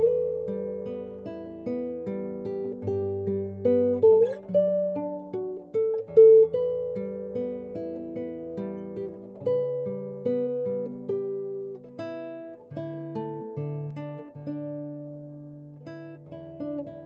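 Nothing here stands out as a fault: the sound comes through a call link with the usual coding texture and a top end that stops around 8 kHz, which is just how this kind of connection normally carries audio.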